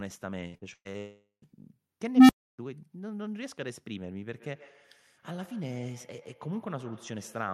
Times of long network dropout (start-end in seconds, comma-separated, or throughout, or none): 0.98-1.44